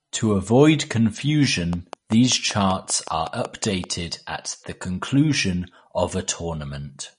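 Throughout the speech, nothing is present above 10.6 kHz, and the remaining sound is watery and swirly with smeared consonant attacks. This is likely MP3 compression at a low bitrate, around 40 kbps, where the encoder cuts the treble and drops weak frequency components frame to frame.

From 1.73 to 3.85 s, just before "at the conclusion of", a train of clicks ticks over the speech: about ten similar pulses at a regular 5.2 per second, peaking roughly 10 dB above the signal, likely interference or a faulty connection.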